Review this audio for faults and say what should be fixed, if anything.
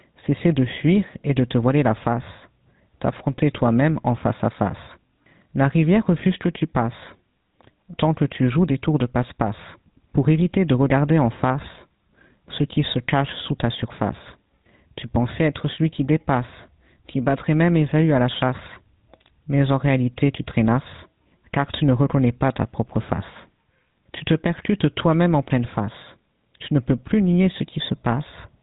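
GSM full-rate codec damage runs through the whole speech clip: nothing survives above 4 kHz, and a plainly audible buzzy, gravelly roughness sits on the voice. The codec rebuilds speech from a vocal-tract filter fed by sparse regular pulses, which fits a 13 kbps GSM full-rate link. To prevent it, carry the call over a wideband codec or capture the audio before it reaches the GSM leg.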